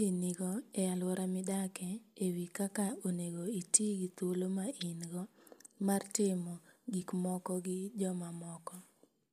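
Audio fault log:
No fault found in this speech recording.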